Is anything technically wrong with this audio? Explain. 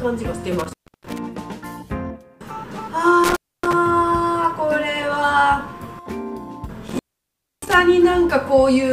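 Yes, there is intermittent contact: a loose cable or plug opens and recloses, cutting the signal with crackle at each break. It happens at 0.59 to 1.18 s (open about 0.31 s), 3.24 to 3.73 s (about 0.27 s) and 6.88 to 7.74 s (about 0.63 s).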